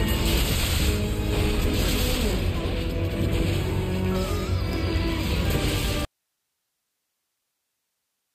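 At 6.05 s the sound drops out abruptly and never returns, leaving only faint hiss roughly 55 dB below the signal. This audio dropout to a faint residue likely comes from the source being lost while the downstream path stayed live. The waveform collapses to a thin flat band, and the spectrogram shows a sharp vertical edge followed by a dim, uniform noise floor.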